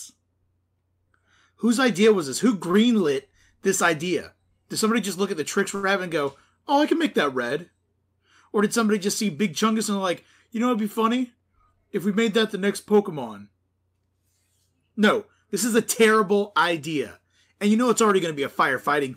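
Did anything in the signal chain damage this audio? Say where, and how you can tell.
Yes. Short stalls from late packets in the network jitter buffer occur at 2.71–2.77 s, with 23 ms filled, and at 5.75–5.86 s, with 76 ms filled. The last sound is held, with a slight buzz or dip, then resumes where it stopped. Unlike packet-loss concealment, nothing is skipped; only delay is added.

Jitter buffer speed-up, also at the receiving buffer, occurs at 11.21–11.73 s, running 110% and trimming about 70 ms, and at 15.56–16.37 s, running 105% and trimming about 50 ms. Pitch-period pieces were cut repeatedly, so the audio hurries at unchanged pitch. A resampling or clock error would shift the pitch as well.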